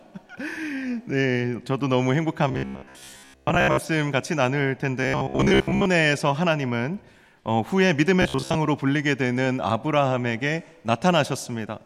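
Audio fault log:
2.48–3.79 s, 5.03–5.86 s and 8.22–8.57 s: robotic sound from repeated short buffers. New audio was likely arriving too seldom, so playback filled the gaps by looping a tiny slice of about 15 ms while most of the real material was skipped. That steady repetition imposes a fixed 66.7 Hz buzz, so the sound turns rigid and metallic, only loosely tracking its original contour, in all three stretches.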